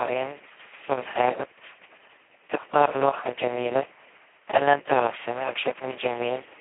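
From the first moment to the last, the speech carries the sound of the Speex codec pushed to its lowest settings. The rate points to something around 2 kbps, which leaves almost nothing for the excitation. So the voice comes out hoarse, buzzy and close to robotic, more vocoder than recording. It's also squeezed into a phone-style band of roughly 300 Hz to 3.4 kHz, with nothing at all above about 3.8 kHz, so it sounds thin and muffled.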